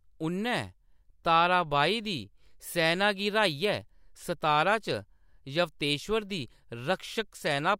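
No technical faults can be heard anywhere in it.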